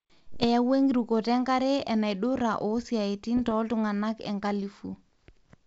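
Bit errors on an ADPCM link hit the speech at 0.34 to 0.45 s and again at 3.37 to 3.53 s, the second burst slightly denser, both at under one percent of bits. Each flipped bit throws off the decoder's step size and predictor, so instead of a single clean click you hear a pop that trails into a brief rough, level-jumping smear. That ringing tail distinguishes it from packet loss gaps. The wideband sound around it fits 64 kbit/s G.722.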